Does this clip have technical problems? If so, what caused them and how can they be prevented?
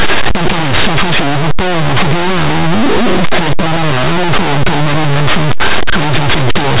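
Yes. Throughout the speech, the sound is swamped by very loud, harsh distortion. This is linear audio read as companded: plain linear 8-bit samples have been decoded as mu-law codes. Small values just to one side of zero come out as the loudest possible outputs, while their mirror images stay tiny, so even quiet moments turn loud. Correctly read 8-bit audio sounds different: its grainy rounding noise sits well below the speech. To prevent it, label the file's coding as linear 8-bit so every reader decodes the samples linearly instead of through a mu-law table.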